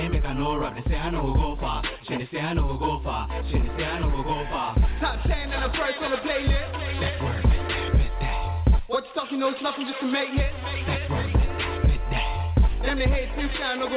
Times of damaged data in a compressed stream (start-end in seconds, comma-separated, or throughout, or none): none